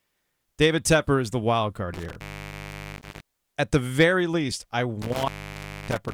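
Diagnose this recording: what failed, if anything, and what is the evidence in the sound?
Intermittent contact in the analogue wiring, from 1.94 to 3.21 s after "is the wild card" and from 5.02 to 6.12 s after "the very least I". A loose plug or cable lost connection, dropping the speech for about 0.76 s and 0.61 s, with crackle where contact breaks and returns.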